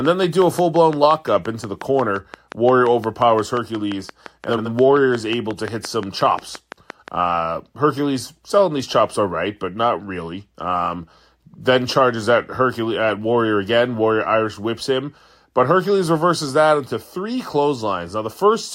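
From 0.05 to 7.09 s a regular train of clicks ticks at 5.7 per second, about 10 dB above the speech, likely from interference or a faulty connection. At 4.48 to 4.69 s, frames out of order swap two adjacent 85 ms blocks, giving a garbled flutter.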